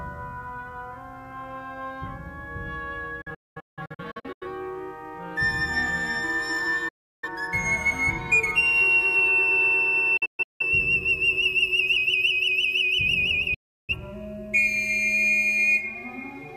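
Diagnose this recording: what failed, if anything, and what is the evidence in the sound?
Video or display buzz is in the analogue wiring the whole way through: a 50 Hz field-rate buzz with hash above it, about 30 dB under the programme, plus a thin 15.6 kHz line tone. A screen or video cable is coupling its scan signals straight into the audio path.

The reception side has a digital broadcast dropout, four of them. At 3.21 to 4.47 s the sound drops out in several short holes, the longest about 0.21 s. At 6.88 to 7.29 s there's one gap. At 10.17 to 10.62 s it breaks up again, longest about 0.17 s. At 13.54 to 13.95 s there's another single gap. Each one fades in about 8 ms, so the receiver is muting on failed frames, and the hole sizes fit frames of roughly 43 ms. Whatever was sent during those gaps is simply gone.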